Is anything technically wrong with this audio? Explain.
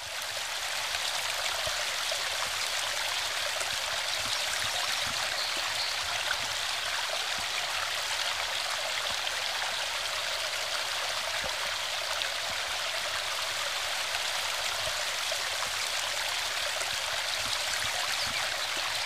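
No, nothing technically wrong can be heard here.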